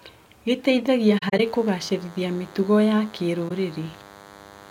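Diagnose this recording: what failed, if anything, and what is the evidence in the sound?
From 1.08 s to the end of the recording, a thin, steady buzz sits under the speech at about 25 dB below it. This is DECT cordless phone buzz, and it enters at the analogue wiring or input stage. A nearby DECT handset or base transmits a radio burst every 10 ms, and the audio circuit rectifies it into a 100 Hz buzz. Mains hum can also sit at 100 Hz, but it is smooth and close to a pure tone. This buzz is rasping and full of harmonics, and it comes in mid-recording.

The speech also drops into short holes. The first cluster runs from 1.18 s to 1.40 s: about 107 ms of audio goes missing in pieces scattered across roughly 213 ms, and the longest single gap is around 40 ms. A second hole, 21.3 ms long, falls at 3.48–3.51 s. This is AAC frame loss with muting, introduced at the codec stage after transmission. 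The decoder zeroed the spectrum of each missing frame, and the overlapping windows fade the sound out and back in. The 21.3 ms unit fits 1024-sample frames at 48 kHz. A buffer dropout would produce hard-edged gaps with clicks. These holes have soft edges.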